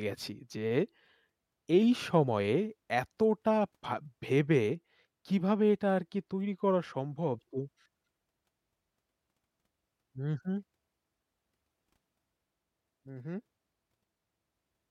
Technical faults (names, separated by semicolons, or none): none